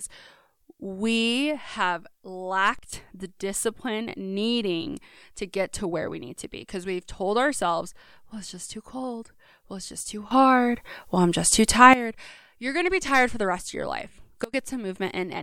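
At 2.79 s the level drops by about 12 dB and stays down until 2.93 s. This is a sudden gain jump. The speech and the background noise fall together, with no fade. At 10.31 s the level rises by about 15 dB and holds until 11.94 s. At 14.44 s it drops by about 24 dB until 14.54 s. Each step is likely a gain setting applied instantly, without a ramp.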